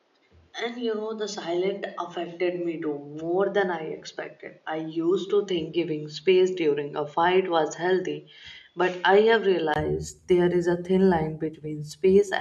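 From 0.0 to 9.76 s the speech sounds dull and boxy, with nothing above 7 kHz, a level drop and added noise floor. Likely an input switched to a poorer device.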